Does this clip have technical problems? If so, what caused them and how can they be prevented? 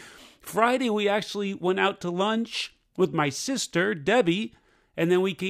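No, this clip has no technical problems, so there is nothing that needs preventing.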